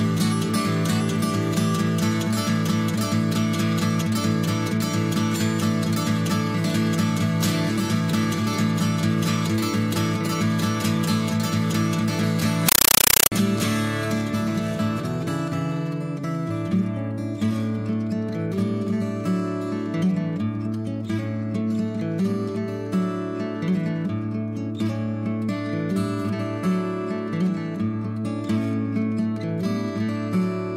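From 12.69 to 13.32 s, a compressed stream is played as audio: undecoded Dolby Digital-style data blasts as chattering static, 8 ms broadband bursts 31.25 times a second between flat zero gaps.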